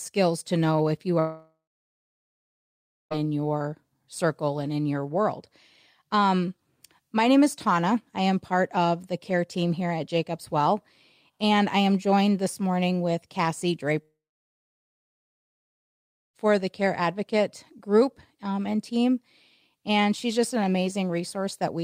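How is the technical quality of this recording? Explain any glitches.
Quality is marred by two gaps where the speech cuts out for seconds at a time, most likely a long network dropout each time. The first runs from 1.19 to 3.14 s (about 1.9 s lost) and the second from 14.03 to 16.37 s (about 2.3 s lost). In each, the receiver briefly stretches the last sound into a fading buzz, then holds near-silence until speech resumes with the missing stretch gone. On a waveform both appear as flat bands. A spectrogram shows a short smeared tail of the preceding sound followed by blank time, about 1.5 s of it in the first gap and about 2.2 s in the second.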